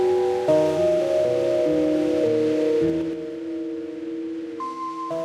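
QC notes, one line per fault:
2.84–3.2 s, zipper noise: the level drops by roughly 10 dB in unsmoothed 3 dB jumps, about ten a second, each one leaving a small audible tick.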